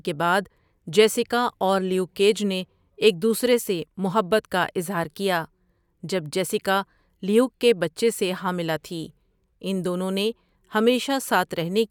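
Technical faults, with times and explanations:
No technical faults can be heard anywhere in the recording.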